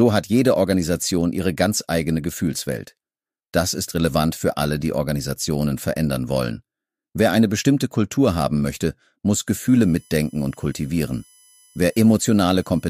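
A thin, fixed-pitch whine enters at 9.47 s and holds to the end, sitting roughly 35 dB below the sound, pitched on 1 kHz with its strongest harmonic at 11 kHz. This is USB whine: the bus's 1 ms frame timing leaks into the audio through power or ground.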